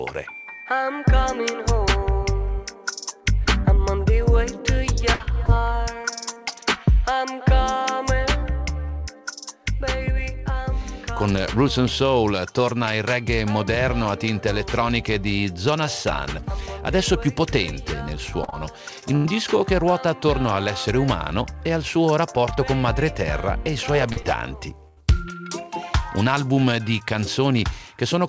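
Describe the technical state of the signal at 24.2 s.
Right around 24.2 s there are two bits of short concealed packet loss, at 24.12 to 24.18 s and 24.22 to 24.26 s, with roughly 40 ms and 20 ms missing. The receiver papered over each hole by extending the preceding sound, so you hear a quick smear or wobble, all within the call path's 8 kHz band.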